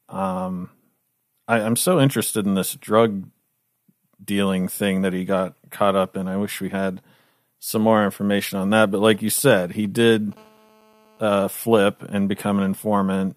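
A nearby 2G phone exchanging signalling bursts with its network had its radio pulses rectified by the audio circuitry from 9.14 to 10.34 s, causing GSM signalling bursts: a galloping dit-dit-dit of brief 217 Hz buzzes, roughly 25 dB below the speech.

From 10.37 to 11.44 s the phone moved to continuous call transmission, pulsing 217 times a second, and the rectified energy became GSM phone buzz: a steady, hard, raspy 217 Hz tone rich in harmonics, about 32 dB below the speech and unrelated to it.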